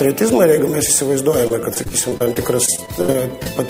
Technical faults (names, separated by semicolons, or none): repeated packet loss (robotic sound)